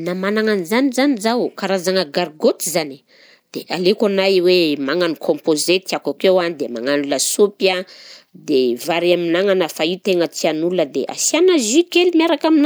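No technical faults are audible.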